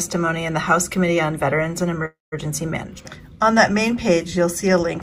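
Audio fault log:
2.05 to 2.34 s, call audio freeze: the sound stalls for about 0.27 s, with the last moment smeared into a fading buzz that drops to near-silence for roughly 0.17 s, then picks up exactly where it left off, with nothing lost. That's most likely packets held up in transit and the jitter buffer running dry, so the receiver padded the wait and everything after lands about 267 ms late.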